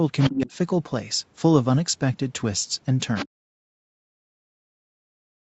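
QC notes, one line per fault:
0.2 to 0.3 s and 3.15 to 3.27 s, other side's voice leaking through: a faint second voice slips in underneath, roughly 10 dB below the talker, in two short scraps of about a tenth of a second each. The likely cause is the far end playing out of the talker's loudspeaker and getting back into the mic, with the echo canceller not scrubbing all of it.
0.3 to 0.52 s, 3.37 to 3.47 s, and 3.67 s to the end, speech suppressed in double talk: after each leak the talker gets pushed down hard, by about 25 dB in the first dip and as much as 40 dB later, and the last stretch stays ducked all the way to the end. It sounds like the canceller couldn't tell the talker from the echo while both were active, so it turned both down together. That's why the voice drops. The top end stops at about 8 kHz across the clip, which fits an Opus call path at roughly 40 kbps.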